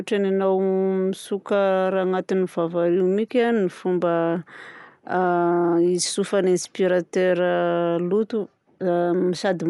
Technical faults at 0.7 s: Dolby Digital compression

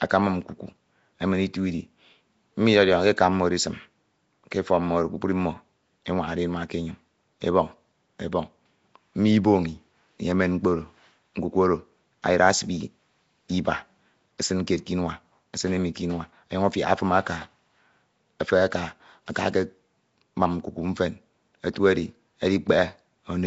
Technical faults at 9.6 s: Nellymoser compression

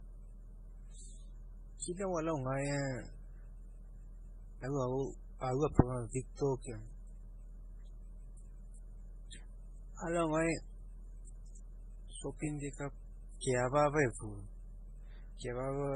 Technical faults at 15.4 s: transcoding between lossy codecs

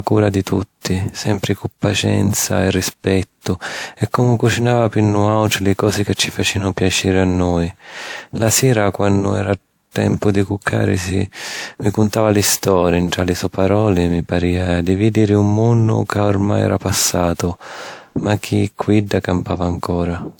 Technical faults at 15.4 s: transcoding between lossy codecs

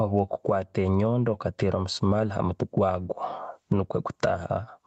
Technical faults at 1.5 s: gain pumping

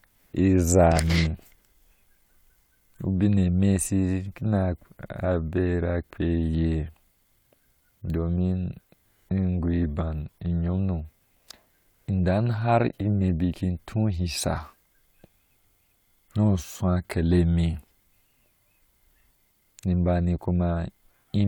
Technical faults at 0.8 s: none

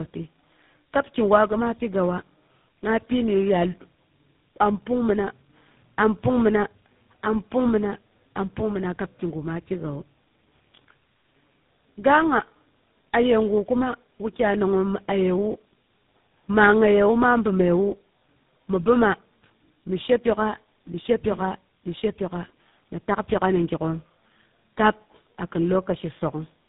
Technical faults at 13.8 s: tandem speech coding

